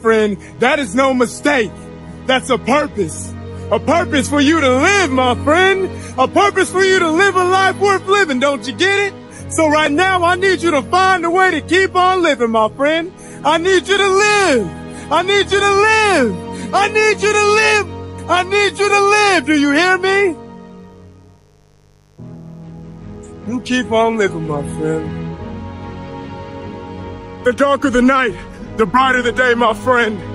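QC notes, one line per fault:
Throughout: mains buzz. Switching spikes from a dimmer, rectifier or poorly shielded run are entering the signal chain at twice the 50 Hz mains rate, so the interference repeats every 10 ms and carries a dense ladder of 50 Hz harmonics stretching well up into the kilohertz range. The result is a constant, raspy buzz sitting roughly 35 dB under the wanted sound, never letting up.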